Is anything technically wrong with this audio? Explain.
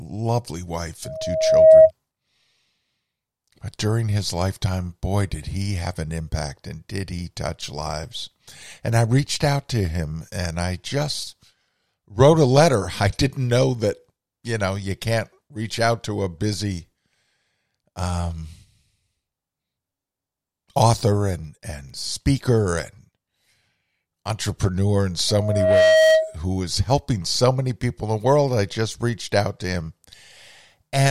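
Yes, there's loudspeaker feedback squeal twice: 1.04 to 1.91 s, and 25.28 to 26.36 s between "entrepreneur in" and "who is helping so". The mic is hearing its own speaker, so a 636 Hz tone builds over roughly 0.7 and 0.5 seconds respectively into a howl, peaking around 10 to 15 dB above the speech.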